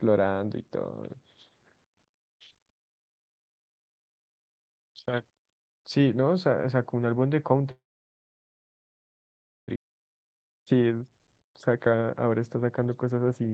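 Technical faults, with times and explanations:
Throughout, low bit depth without dither: the speech carries a grainy, gritty edge that moves with the signal and gets worse in the quiet parts, where the tails of sounds crumble and sputter rather than fading smoothly. That points to the audio likely having been rounded to around 10 bits with no dither, so the rounding error tracks the waveform instead of sitting underneath it as a steady hiss. The error sits at about 45 dB below the signal.
7.71 to 9.70 s, call audio freeze: the audio stalls here for nearly two seconds. There's a brief smeared continuation of the last sound, then it drops to silence for most of the stretch, about 1.9 s of nothing. That's the classic picture of a jitter buffer running dry while packets are stuck somewhere upstream, likely on the network. Nothing is actually lost, though. When playback resumes it picks up where it stopped, so the speech right after the freeze is running about two seconds late.
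9.76 s, skip ahead: right after the freeze, playback jumps forward with essentially no gap. Roughly a second and a half of speech simply isn't there, and the two sides of the cut are butted together. A chunk was dropped, either on the way or by the receiver throwing away a backlog, and this claws back some of the latency the freeze added.
9.86 to 11.02 s and 11.43 to 13.49 s, jitter buffer speed-up: in both stretches the talking sounds a bit rushed, but the pitch stays put. The buffer is still holding more than it wants, so it keeps snipping out tiny pitch-period-sized slices to catch up. The first run plays at about 106% speed and drops around 70 ms. The second is more noticeable at 114% and removes about 300 ms in total, so the hurried feel is clearer there. The Opus call path itself is working normally, with audio band-limited to 8 kHz.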